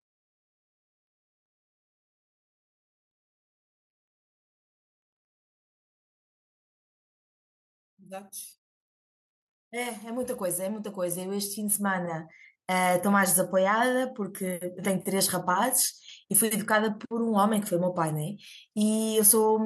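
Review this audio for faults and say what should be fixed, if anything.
Automatic gain rising, from 9.7 s to 12.97 s. The automatic gain control judged the speech input too quiet and raised its gain slowly over about three seconds, by about 11 dB in total. Because the whole signal is amplified, the voice and the background noise swell together rather than the speech alone getting louder. To prevent this, set a fixed input gain or slow the AGC's release so it doesn't chase quiet passages.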